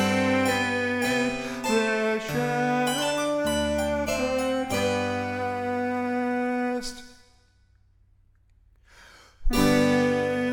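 No technical faults are audible.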